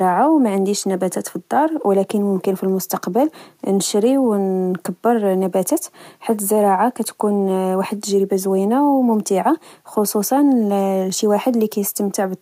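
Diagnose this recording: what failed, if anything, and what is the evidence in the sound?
Nothing failed in this recording.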